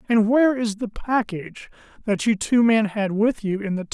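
No technical faults can be heard anywhere in the speech. At no point does the audio show a problem that would trace back to how it was captured, carried or reproduced.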